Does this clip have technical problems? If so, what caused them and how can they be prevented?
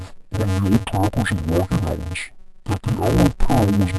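Yes. The speech has interleaved audio read as planar from start to finish. Each short chunk of alternating left and right samples was split in half, with the first half taken as left and the second as right. Both halves then play at half speed side by side, so the pace holds but the sound comes out dull and robotic. Because the chunks are only about 5.33 ms long, there's no clear octave drop, just a buzz at roughly 188 Hz, which fits a 128-sample block. To prevent it, make sure the reader's channel-layout flag matches how the buffer was actually written, interleaved or planar, before any samples are pulled out.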